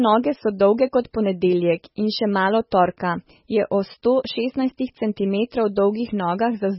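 Speech, heavily damaged throughout by what is likely MP3 compression at a very low bitrate, around 16 kbps. Nothing survives above 5.6 kHz, so the audio sounds dull and watery. A spectrogram shows a hard flat ceiling at 5.6 kHz and speckled, flickering gaps below it.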